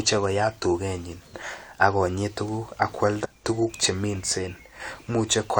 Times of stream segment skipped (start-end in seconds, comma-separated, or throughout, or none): 3.24-3.26